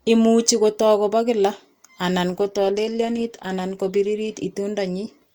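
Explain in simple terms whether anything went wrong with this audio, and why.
An adaptive stream at a lower bitrate: from 2.31 to 4.31 seconds, just after "kobo kila anan", the speech suddenly loses quality. The stream switched to a much more heavily compressed version of the same audio, most likely because the connection slowed. With far less data to work with, the encoder throws away more detail, so compression artefacts become easier to hear. There's no gap or dropout; the quality drops abruptly, then recovers just as suddenly two seconds later.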